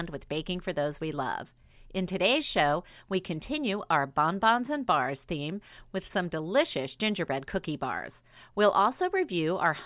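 Speech recording, no audible technical faults found on listening.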